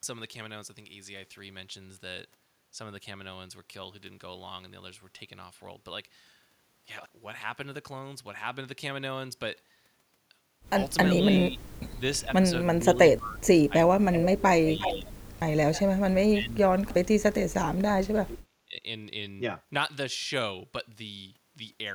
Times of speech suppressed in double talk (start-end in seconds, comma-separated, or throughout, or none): 11.11-15.14, 15.88-18.84